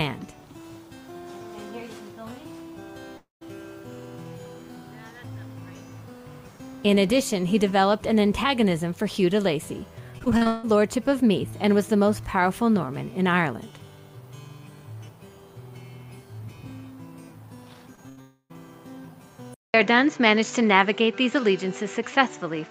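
From 3.17 to 3.43 s there is a long network dropout, likely caused by audio failing to arrive for about a quarter of a second. The last sound is stretched into a fading buzz or hiss. That decays into silence of about 150 ms. The audio then picks up again further on. About 240 ms is simply gone, and the sound jumps across the hole.

Between 10.19 and 10.65 s comes repeated packet loss with a robotic sound. There are six separate gaps. The longest lasts 160 ms. Each one is patched by extending the sound just before it. More than half of this stretch is patched rather than real. About 280 ms goes missing in total. The result is choppy, with pieces dropping out in quick succession.

At 17.95 s there is a short concealed packet loss. Only 20 ms failed to reach the decoder. The gap is filled by continuing the preceding sound and blending it back. It comes across as a tiny smear or wobble.

From 18.09 to 18.19 s a burst of packet loss removes 80 ms. 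The receiver holds the last sound and turns it down as the gap runs on. A voiced sound becomes a brief held buzz, and other sounds a fading hiss. Playback then resumes further along, skipping the lost part.

Almost immediately, from 18.21 to 18.52 s, a second long network dropout follows. Its likely cause is another stall in delivery, this time losing about 280 ms. Again the last sound is carried on and fades, leaving about 70 ms of silence. The audio returns with that stretch missing. Together with the burst just before it, this makes the region around 18 s broken up.

At 19.54 s the input switches to a poorer device, and the new input likely runs to the end. A silence of about 200 ms marks the moment of the switch. Afterwards nothing is present above 7.6 kHz, so the sound turns duller and less airy. A new background noise appears, roughly 40 dB below the signal. The overall level stays about the same.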